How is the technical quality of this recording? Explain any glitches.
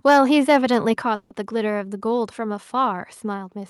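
The quality is rough in the first second or so: there's distortion, a sudden level drop and a short stall in the speech.

From 0.06 to 0.18 s and again from 0.49 to 0.77 s you get a harsh, crackly edge on the loud bits. That's likely microphone overload, with peaks driven about 3 dB and then about 2 dB past the converter's ceiling, so their tops get sheared off. The first burst clips a noticeable chunk of the waveform and the second only a sliver.

At 1.02 s everything, including the background, drops by about 5 dB in one go. That's likely the microphone volume stepped down by the call software reacting to those clipped peaks.

From 1.15 to 1.32 s the sound hangs as a fading buzz or hiss for about 150 ms, then carries on where it left off. That's likely a call audio freeze: late packets drained the jitter buffer, so a gap was inserted but nothing was lost.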